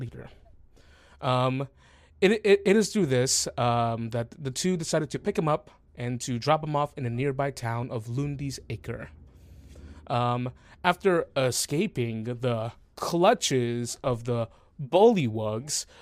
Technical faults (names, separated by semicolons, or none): none